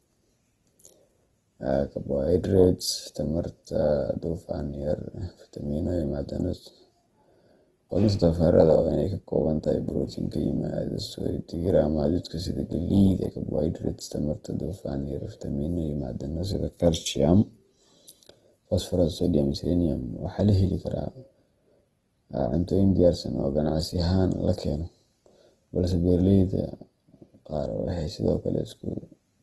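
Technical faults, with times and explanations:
Throughout, Opus compression: speech sounds grainy and rough, likely from a low bitrate around 16 kbps in music mode; spectrogram shows nothing above 12.1 kHz and noise-filled bands.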